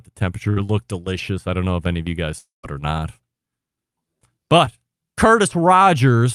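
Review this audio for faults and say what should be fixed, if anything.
Right at the start, from 0.49 to 0.58 s, there's a burst of packet loss just before "it looked delicious I". The receiver continues the last bit of speech and fades it for about 67 ms, and when the audio picks up again roughly 60 ms of speech is simply gone. That's a few packets in a row not arriving in time. A bigger jitter buffer or in-band FEC would help ride out bursts like this.

The bigger problem is the long network dropout from 2.38 to 2.65 s, between "any of you guys" and "it or not". First you get about 100 ms of the last sound continued and fading, then around 150 ms of near-silence, and about 260 ms of speech never comes back. That pattern is most likely a stretch where nothing reached the receiver at all, so concealment ran out and muted. Fixing the link itself, through steadier Wi-Fi, better routing or some redundancy, is the real cure here.

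Last, from 4.65 to 4.69 s there's a short concealed packet loss. It's only a quick smear where about 20 ms went missing and roughly 14 ms was patched over by continuing the previous sound before blending back in. A consonant could get swallowed there. Turning on FEC, or giving the jitter buffer a little more headroom, should catch isolated drops like this one.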